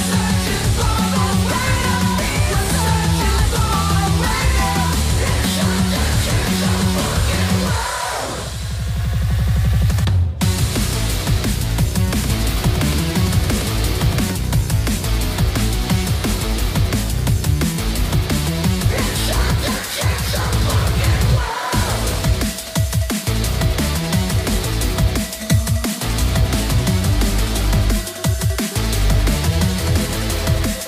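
A second, slower capture path or a misaligned edit has likely mixed a duplicate of the signal back in, producing a doubled audio track from 12.08 to 14.32 s. The copy trails the original by about a tenth of a second and sits a few decibels lower, so every onset is followed by a dry, full-range repeat with no decay or room colour. It appears and vanishes abruptly at those boundaries, leaving the sound briefly smeared and stuttering.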